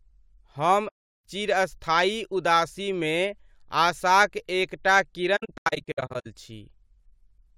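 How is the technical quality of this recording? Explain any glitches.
The recording has two dropouts from AAC frame loss with muting. The first runs from 0.88 to 1.24 s as one continuous gap. The second, from 5.36 to 6.27 s, is a scatter of shorter holes, the longest around a tenth of a second. Lost frames were decoded as silence, and the overlapping transform windows fade the speech out and back in, so each hole has soft edges. A spectrogram shows full-band blank columns with tapered borders. The waveform shows a smooth envelope dip to near silence.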